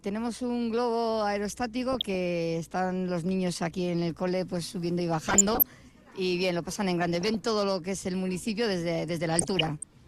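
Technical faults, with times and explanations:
1.93–2.15 s, 5.29–5.63 s, 7.21–7.40 s and 9.32–9.87 s: DAB burbling. Each burst lays short blips of noise over the sound. Weak reception let bit errors, about 0.4 to 0.5 percent, slip past error correction into the MP2 data. Corrupted samples put short noise blips into single sub-bands, and corrupted scale factors make sub-bands jump in level for up to a frame. The last burst is longest and densest.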